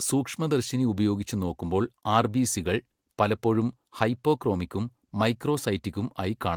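No technical faults are audible.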